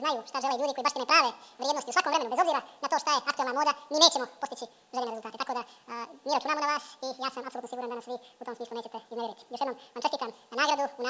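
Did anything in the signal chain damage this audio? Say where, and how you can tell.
Yes, at playback: a wrong sample rate throughout, which fits 8 kHz audio played unconverted at 16 kHz, so it runs twice as fast and an octave high.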